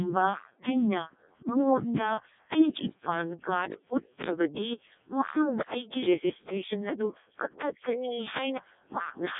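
The speech runs through a Codec 2 vocoder for the whole clip, which fits its 0.7 kbit/s mode: the voice is resynthesised from sine waves, sounding robotic and buzzy, and nothing sounds above 3.8 kHz.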